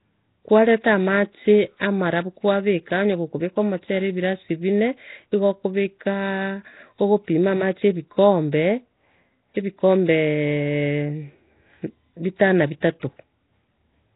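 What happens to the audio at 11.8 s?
At 11.8 s the speech carries the same rough, hissy, underwater smear heard throughout, likely Nellymoser compression at a low bitrate; a spectrogram shows nothing above 3.8 kHz and speckled noise filling weak bands.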